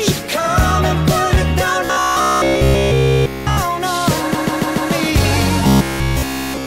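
Robotic sound from repeated short buffers runs from 1.85 to 3.57 s, and again from 5.64 to 6.66 s: the audio collapses into a rigid metallic buzz near 66.8 Hz. The likely cause is that every stretch is a repeat of a roughly 15 ms fragment played in place of fresh audio.

Repeated frames occur between 4.33 and 4.91 s, where a 144 ms block of compressed audio is played four extra times. This produces an audible stutter and lengthens the audio by 576 ms.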